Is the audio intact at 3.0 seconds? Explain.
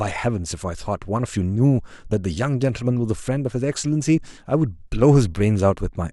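Yes, at 3.0 seconds the speech is intact, with no dropout, click, distortion or other fault at that point.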